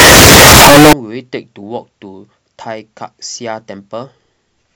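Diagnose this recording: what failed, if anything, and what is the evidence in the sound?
From 0 to 0.93 s the speech becomes harsh, loud distortion, with quiet moments as loud as the rest. Likely sample-format conversion with signed and unsigned mixed up: the flipped top bit makes each zero crossing a full-range jump. The spectrogram shows a dense broadband smear.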